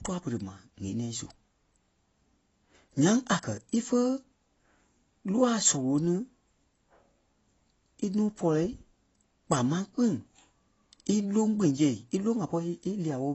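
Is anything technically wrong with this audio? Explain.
Yes, there are two faults.

Throughout the speech, the audio has no content above 7.9 kHz and plainly audible codec damage. This is likely AAC compression, specifically AAC-LC at a low bitrate, roughly what a 24 kbps stream would produce. The encoder quantises each frame's frequency lines against a hearing model, and when bits run short it removes the top band and leaves gaps or substitute noise in the spectrum. The result is a dull, smeared sound with a warbling, fizzy texture on sibilants and sustained sounds.

From 5.65 to 5.69 s, a span of about 44 ms, there is hard clipping. At that point the signal was driven about 7 dB beyond what a stage in the chain could pass, so the waveform peaks were cut flat. Those flattened tops add harmonics high up the spectrum, which is heard as a short burst of crackle and distortion on the loud part of the speech there.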